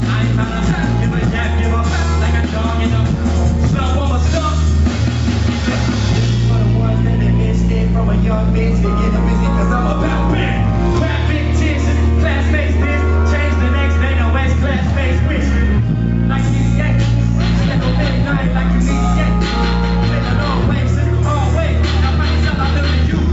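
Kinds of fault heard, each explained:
Gain pumping: Throughout the clip the level keeps swelling and ducking, swinging by around 5 dB as loud sounds come and go. The likely cause is input gain set far too high for the microphone, with a fast limiter or compressor pulling it down on each loud moment. Loud and soft passages end up closer in level, so the sound comes across squashed. The content above 8 kHz is missing, as the call path sets it.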